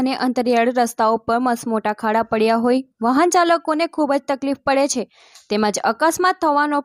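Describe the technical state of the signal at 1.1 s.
At 1.1 s the signal is intact, with no audible fault at that moment.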